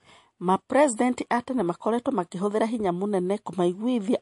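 From start to finish, the speech has likely passed through MP3 compression at a low bitrate, consistent with roughly 48 kbps. With so few bits, the encoder trims the treble above a fixed cut-off and drops weak frequency lines, which flicker in and out between frames. The result is plainly audible: a watery, swirling texture behind the voice, metallic chirping on s sounds, and consonant onsets that smear rather than start crisply.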